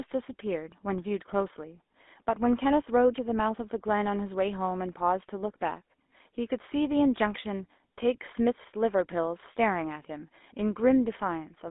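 From start to finish the speech carries GSM full-rate codec damage, plainly audible. The coder models the vocal tract and rebuilds it from a sparse, regularly spaced pulse excitation, so voices take on a buzzy, gravelly grain, consistent with a 13 kbps full-rate coder. The band runs only from 250 Hz to 3.6 kHz, but what separates this from mere telephone band-limiting is that rasp on the voice itself, not just dullness.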